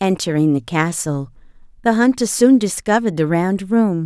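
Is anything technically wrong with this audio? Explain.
No, no technical faults heard.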